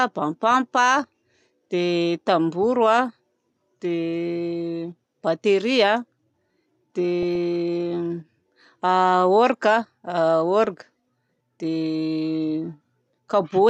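Weak DAB reception let bit errors slip past the error correction into the MP2 data, producing DAB burbling at 7.23 to 7.36 s and again at 10.65 to 10.69 s, with a fraction of a percent of bits in error. Corrupted samples and scale factors throw individual sub-bands to wrong levels frame by frame. The first, longer burst suggests a run of several damaged frames. Both bursts put short blips of noise into single sub-bands over the speech.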